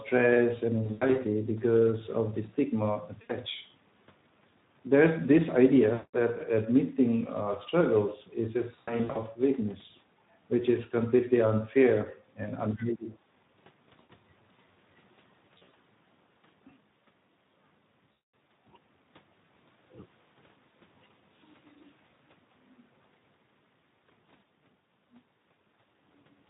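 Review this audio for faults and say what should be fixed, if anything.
Speex codec artefacts run through the whole speech clip: a plainly audible hoarse, noisy edge on the speech. That points to a low setting around 11 kbps, where the excitation gets too few bits. Move to a wideband codec such as Opus at a higher bitrate.

VoIP packet loss concealed by the speech codec hits at 0.83–1.19 s, 3.21–3.33 s, 5.93–6.14 s, 8.75–9.21 s, 13.99–14.11 s, 15.57–15.74 s and 18.12–18.33 s. The decoder stretches the last sound into a buzzy tone or coloured noise that fades, and the voice stays weak just afterwards. Add a jitter buffer and FEC on the network path.

Around 12.69–13.13 s, the speech dips by roughly 15 dB for about 400 ms, most likely speech suppressed in double talk, with the echo canceller turning the talker down along with the loudspeaker echo. Retune the echo canceller's double-talk detection so it ducks less.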